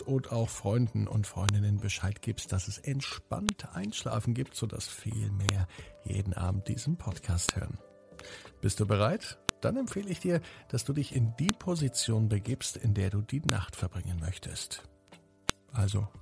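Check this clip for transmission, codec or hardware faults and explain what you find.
One fault runs through the clip: a file header played as audio, repeating every 2 s. Sharp clicks land at 1.49, 3.49, 5.49, 7.49, 9.49, 11.49, 13.49 and 15.50 s. Each marks the start of a new 2-second piece whose leading header bytes were decoded as samples instead of stripped. Each is a brief, loud snap regardless of the surrounding sound. On a waveform it is a short spike; on a spectrogram, a thin full-band vertical line at each boundary.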